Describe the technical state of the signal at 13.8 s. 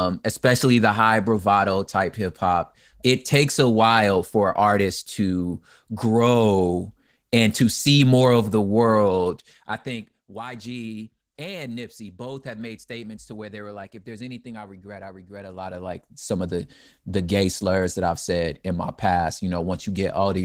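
At 13.8 s the speech carries Opus voice compression, present across the whole clip. Linear-prediction coding below 8 kHz with a thin transform layer above, at what sounds like about 16 kbps, leaves the voice plainly muffled, hoarse and slightly robotic.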